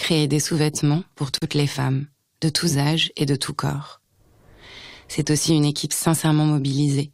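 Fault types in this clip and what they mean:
Gap at a join of encoded pieces: untrimmed encoder padding leaves 37 ms of silence at 1.38 s; unlike a dropout, nothing is lost before "les femmes de tous".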